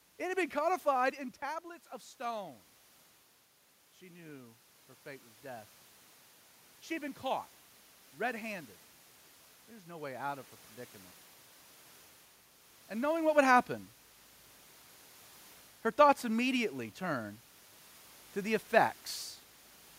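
A speech recording with automatic gain rising from 6.87 to 10.53 s. The gain control heard a quiet input and pushed its level up slowly, by about 4 dB. Voice and room noise swell together over those seconds. The level shifts near 1 s and 13 s come from the talker moving.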